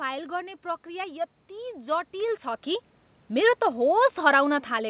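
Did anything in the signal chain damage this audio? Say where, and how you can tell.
No, nothing in the signal chain has damaged this audio; it's just ordinary speech that has been through a normal call path, with nothing there that points to a broken stage.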